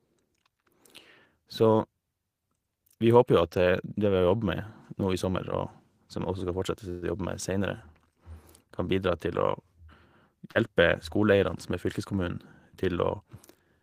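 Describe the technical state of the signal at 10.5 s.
Right around 10.51 to 10.57 s there's a short concealed packet loss. Roughly 40 ms of the speech didn't make it to the decoder in time, so the receiver patched about 38 ms of it by carrying the preceding sound forward, pitched if voiced, shaped noise if not, and then crossfaded back into the real signal. What you hear is a quick smear or wobble, and any brief consonant sitting in that gap can simply drop out.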